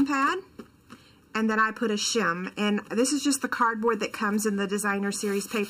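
From start to finish there's channel delay causing comb filtering. One side of what was once a two-channel signal lags the other by something like 0.7 ms, and when the two got folded to mono the shared content cancelled at evenly spaced frequencies, the first dip sitting around 700 Hz with further ones roughly every 1.4 kHz above it. Because those notches never move, the whole clip has a hollow, phasey colour.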